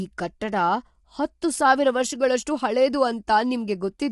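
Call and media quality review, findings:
Throughout: rough, grainy speech, noise filling gaps between harmonics, nothing above 11.6 kHz. Likely low-delay AAC compression (AAC-ELD), short frames resolving pitch poorly, consistent with roughly 32 kbps. Distinct from plain band-limiting: graininess, not just dullness.

3.27 s, after "ಹತ್ತು ಸಾವಿರ ವರ್ಷಗಳಷ್ಟು ಹಳೇದು": pre-echo, about 10 ms of hiss ahead of an attack, which sounds softened. Block-wide quantisation noise leaking before the transient. Unlike a click, the noise precedes the onset rather than sitting on it.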